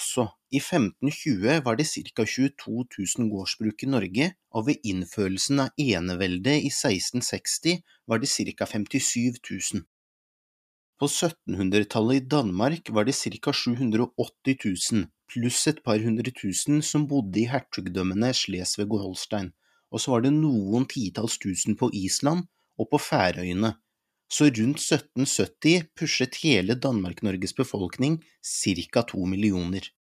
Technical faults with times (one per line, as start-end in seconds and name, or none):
none